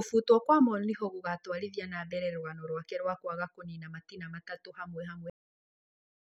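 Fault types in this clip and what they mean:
Cut-off end: the final stretch of audio never got written out, so the speech stops dead mid-sound at about 5.30 s. There's no natural decay, just an abrupt drop into digital silence that runs for roughly the last second of the clip.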